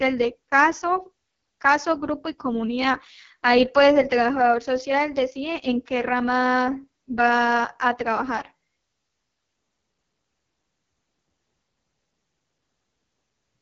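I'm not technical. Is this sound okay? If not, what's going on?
No, not quite. The whole clip has been through an AMR wideband (HD Voice) codec, the phone-call compression, at one of its lowest settings. That's why the speech sounds rough and raspy throughout, and the sparkle above about 7 kHz is gone.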